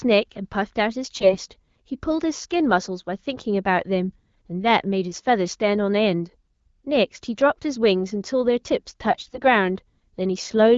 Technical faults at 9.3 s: AMR bit errors

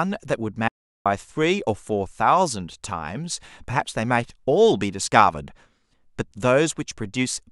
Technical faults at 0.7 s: audio dropout to silence

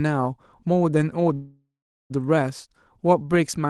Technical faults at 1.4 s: call audio freeze

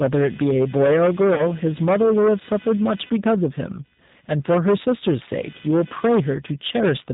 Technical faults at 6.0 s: computer activity noise; hard clipping; G.729 codec

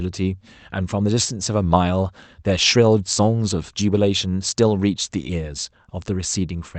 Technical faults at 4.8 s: none

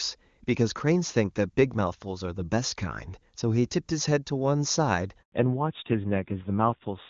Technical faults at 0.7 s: none

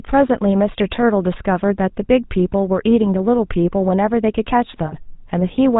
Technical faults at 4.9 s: GSM full-rate codec; lost GSM frames

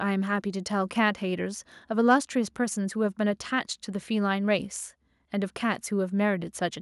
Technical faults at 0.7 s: none

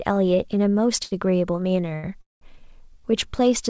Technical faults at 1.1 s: short stall from a late packet

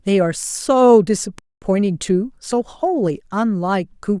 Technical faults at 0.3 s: none

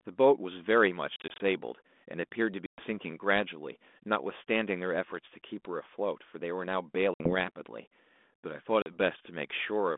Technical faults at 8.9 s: packet loss on an ADPCM call

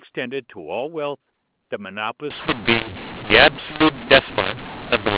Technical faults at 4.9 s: mu-law and A-law mixed up

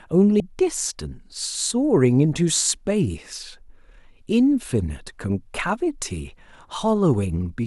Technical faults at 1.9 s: none

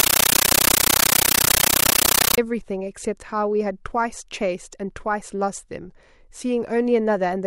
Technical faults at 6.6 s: none

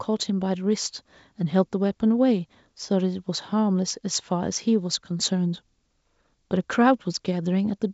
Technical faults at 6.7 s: none

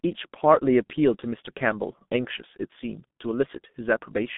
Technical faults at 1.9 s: G.723.1 codec

